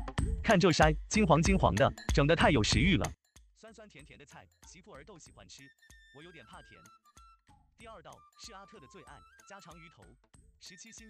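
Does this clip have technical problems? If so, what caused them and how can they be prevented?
Yes. From 3.14 s to the end, the summed level drops by about 28 dB, likely from one channel inverted, so shared content cancels in mono. Check polarity on each channel before summing.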